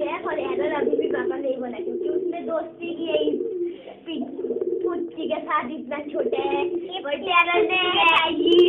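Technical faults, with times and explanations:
Nothing stood out on listening to this recording.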